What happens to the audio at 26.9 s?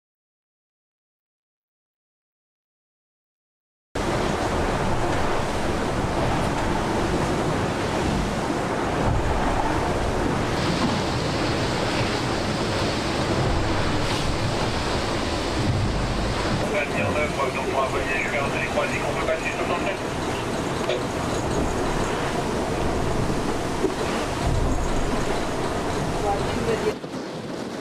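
At about 26.94 s there's an overlap between stream segments. Two segments claimed the same stretch of time, so the player trimmed what it took for a duplicate. Roughly 16 ms of real audio vanished, and the waveform jumps there with a short click or tiny skip.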